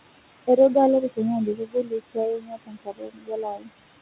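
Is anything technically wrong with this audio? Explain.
Yes. Throughout the speech, the background pumps, dropping sharply between phrases and rising underneath them. These are noise suppressor artifacts: the steady room noise is pulled down by about 21 dB, frame by frame.

Speech is also cut by the noise suppressor. From 0.47 to 0.76 s, brief fragments dip by up to about 10 dB, totalling roughly a tenth of a second. From 1.46 to 3.71 s, about two seconds of speech sound swallowed, falling by as much as about 22 dB. In both stretches the suppressor mistook quieter speech for noise and turned it down with the background. The room noise it acts on sits about 14 dB under the speech, and the call path carries nothing above 4 kHz.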